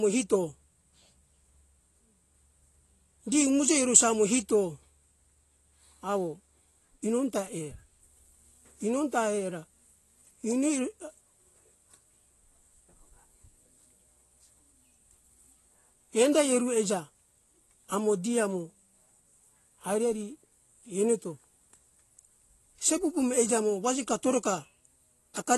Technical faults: AAC compression

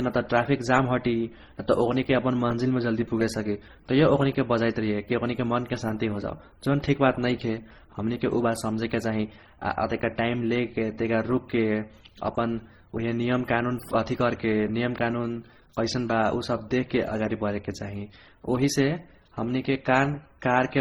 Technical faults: transcoding between lossy codecs

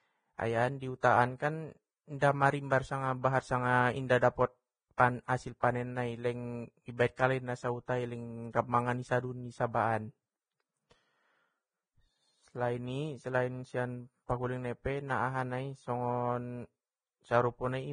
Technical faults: Vorbis compression; pre-echo

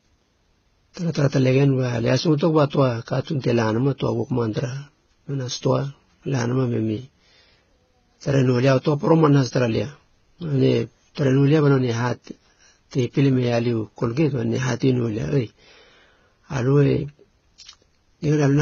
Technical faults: transcoding between lossy codecs

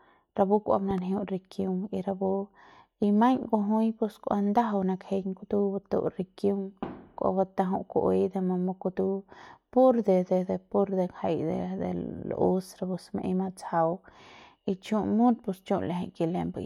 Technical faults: loud pop

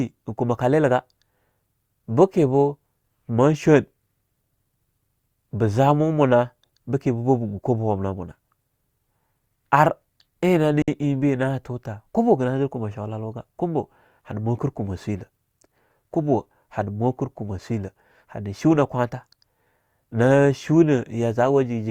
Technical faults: gap at a join of encoded pieces

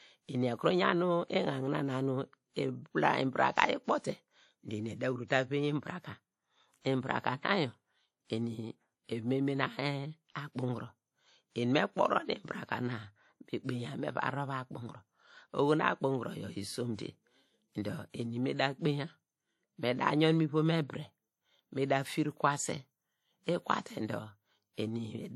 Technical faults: WMA compression

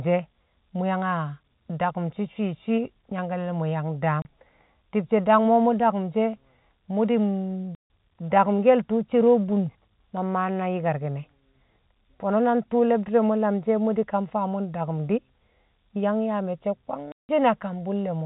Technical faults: packet loss filled with silence

